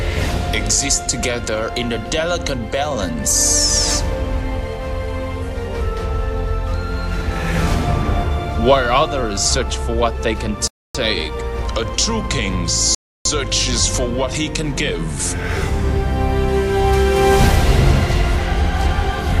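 At 10.67 s the player runs out of downloaded audio and has to wait for more, a rebuffering stall. The sound drops to silence for 0.27 s and then picks up exactly where it left off, so nothing is skipped but the timeline is stretched. The same starvation returns at 12.95 s, this time holding the silence for 0.31 s before playback resumes seamlessly from the point of interruption.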